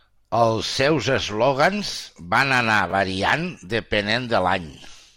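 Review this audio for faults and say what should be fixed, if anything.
Chunks out of order at 2.90–2.92 s, just after "seus eslògans van anar". A 10 ms chunk plays one chunk late, causing a brief jumbled moment. Reorder buffered chunks by sequence number before playback.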